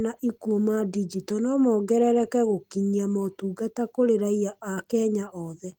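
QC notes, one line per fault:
No faults found in this clip.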